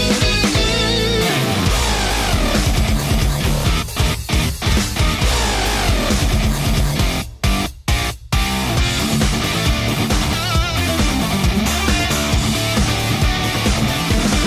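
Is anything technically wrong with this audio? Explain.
No, nothing technically wrong.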